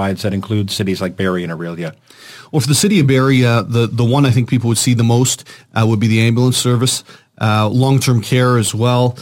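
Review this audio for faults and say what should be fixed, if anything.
Crude rate conversion runs throughout the speech. The pattern points to a 48 kHz to 44.1 kHz change done by picking the nearest sample, without filtering, leaving an inharmonic, gritty fizz roughly 25 dB below the speech that tracks louder and brighter syllables. Redo the conversion from the original using a proper band-limited resampler.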